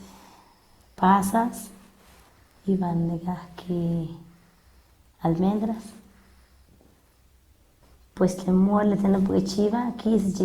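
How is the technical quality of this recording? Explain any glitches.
The technical quality is compromised by one fault, present from start to finish. The speech has generation loss throughout. It sounds swirly, smeared and hollow, and consonant attacks blur. This likely comes from repeated lossy encoding, perhaps seven passes, each quantising afresh on a shifted frame grid. The character fits Opus at about 64 kbit/s. Content reaches up to 20.1 kHz.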